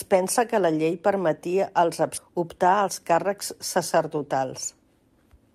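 At 2.17 s there is a skip ahead: roughly 0.7 s of speech was discarded while later audio was already queued, so playback leaps forward with no silence inserted. Unlike a dropout, which leaves a gap or fill, the two sides butt together abruptly.

From 2.27 to 2.89 s a jitter buffer speed-up follows. The receiver trims pitch-period-sized slices to shed excess delay, removing about 70 ms, so the speech runs at about 108% speed and sounds rushed. Pitch stays unchanged, which distinguishes it from a playback-rate error.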